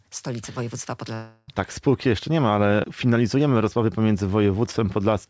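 At 1.14 s the sound stops progressing and is replaced by a fading buzz-like continuation of the last sound until 1.50 s. This is likely a long network dropout: about 0.34 s never arrived, concealment filled the entire gap without falling silent, and playback resumes past the lost material. Throughout, the WebRTC call path passes nothing above 8 kHz, consistent with a wideband codec such as G.722.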